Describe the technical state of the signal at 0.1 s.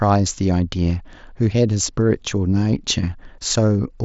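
At 0.1 s the signal is intact, with no fault present, the speech carried through the Bluetooth mSBC headset codec with its usual top end near 7.7 kHz.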